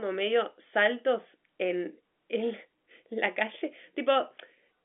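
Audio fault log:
No fault found in the audio.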